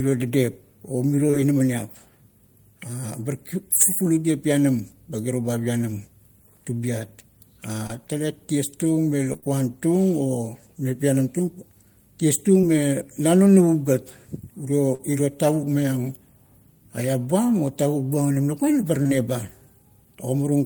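Short concealed packet loss first occurs at 1.27 to 1.35 s, where two consecutive 20 ms packets failed to arrive, and again at 7.87 s. Each time the receiver extended the preceding sound to fill the hole and then crossfaded back, leaving a brief smear or wobble. From 9.33 to 9.56 s comes repeated packet loss (robotic sound): four gaps of up to 24 ms, with concealment filling about 45% of the span. The rapid succession of patches makes this stretch choppy. Short concealed losses recur at 14.95 s, spanning 40 ms there, and at 19.03 to 19.11 s, another back-to-back pair.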